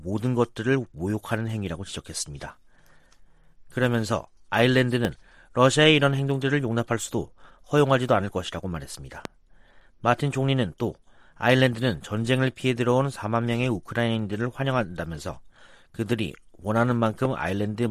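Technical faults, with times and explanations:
5.05–5.07 s, 9.25–9.27 s and 17.25–17.27 s, loud pop: each is a single sharp pop lasting about 20 ms, roughly 10 dB above the sound at 5.05 s and about 15 dB at the later two. The likely cause is a sudden voltage step from a plug, switch, static discharge or driver glitch, which the following circuitry rounds into a brief thump. Unlike a dropout, the sound carries on underneath each pop, and unlike a faint click, these stand well above the level of the sound.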